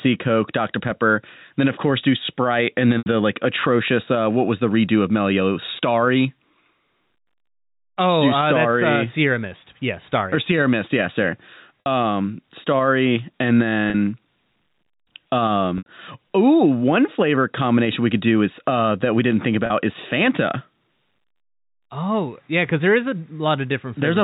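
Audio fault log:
2.98, 11.80, 13.90, 15.78 and 19.66 s: packet loss with pitch repetition. Gaps of 40 to 80 ms, for example after "course do sprite and", are bridged by repeating the last pitch period, producing brief held, buzzy tones.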